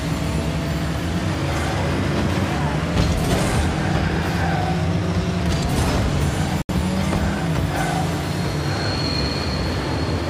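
At 6.62 s the sound cuts to silence for about 73 ms, then resumes at 6.69 s: a Bluetooth stall, likely from radio interference delaying packets until the headphones' buffer emptied. Unlike concealment glitches, the gap is clean silence, not smeared or repeated audio.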